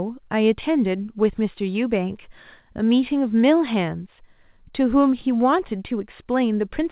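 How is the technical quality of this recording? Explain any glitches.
The technical quality of this recording is sound and there are no glitches to explain, with the call path's narrow band topping out around 4 kHz as expected.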